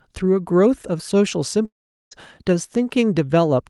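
The clip is speech heard through a call codec whose top end stops near 12 kHz, consistent with Opus. From 1.65 s to 2.13 s there is a gap. The last sound smears into a fading buzz, then near-silence holds for about 0.4 s. Speech resumes with roughly half a second missing. This is likely a long network dropout, with the receiver filling the loss.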